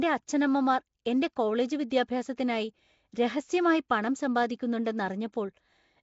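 Throughout, the speech has a rough hissy halo and smeared underwater blur, nothing above 7.7 kHz, likely Nellymoser compression filling starved bands with noise rather than chirps.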